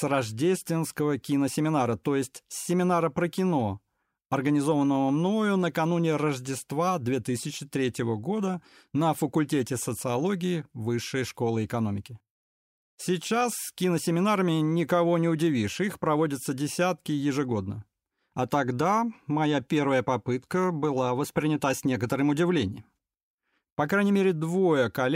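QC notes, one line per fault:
No faults found.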